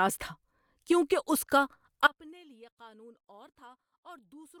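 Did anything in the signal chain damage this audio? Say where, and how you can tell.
Yes, an audio dropout to a faint residue. After "اس کا" at 2.07 s, the speech cuts off abruptly and never returns. Only a faint leak remains, roughly 30 dB down. The path stayed live, so this is likely a broken analogue connection upstream.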